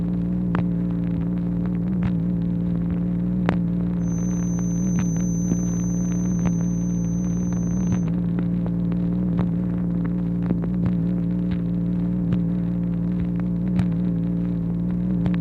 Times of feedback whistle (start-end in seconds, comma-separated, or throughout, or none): 3.97-8.11